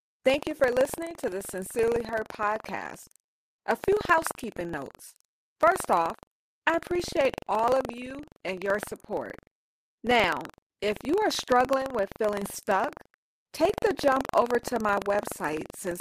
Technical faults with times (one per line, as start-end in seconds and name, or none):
0.00-16.00 buffer tearing
1.01-1.11 lost packet rebuilt from error correction
7.89-8.27 lost packet rebuilt from error correction
10.43 lost packet rebuilt from error correction
11.77-11.87 lost packet rebuilt from error correction